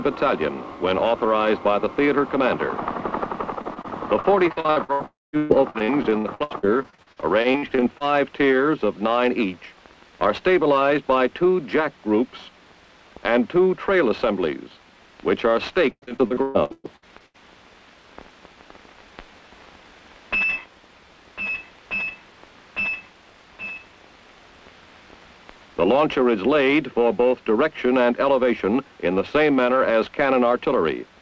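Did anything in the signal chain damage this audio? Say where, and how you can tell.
Yes, the damage is on the network side of the call. The G.722 path itself is fine apart from its usual ceiling, with nothing above 8 kHz.

The repeated packet loss (robotic sound) shows up from 3.62 to 8.02 s, with 36 short holes, the longest about 130 ms. Roughly 28% of that stretch is patched. It comes back from 15.9 to 17.36 s with around a dozen holes, the longest about 121 ms, and nearly half of that span is patched. The receiver keeps re-extending the last bit of sound to cover each hole, which gives that choppy sound with pieces missing.

Inside the first rough stretch, from 5.06 to 5.35 s, there's a short buzzy continuation, then about 0.2 s of plain silence before the sound picks up again, minus the missing chunk. That's likely a brief long network dropout. Nothing arrived for close to 0.3 s, the concealment ran out of road, and it gave up to silence instead of stretching further.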